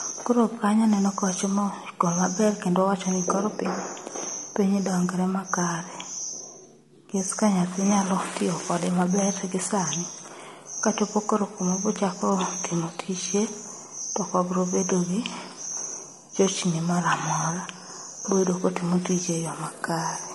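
Throughout the speech there's plainly audible grainy roughness, likely low-delay AAC compression fitting a bitrate around 32 kbps, whose short frames blur the pitch harmonics.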